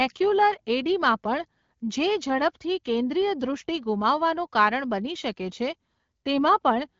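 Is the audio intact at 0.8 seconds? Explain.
Yes, the speech at 0.8 s is intact, carried through the AMR wideband (HD Voice) codec at 12.65 kbit/s with no fault at that moment.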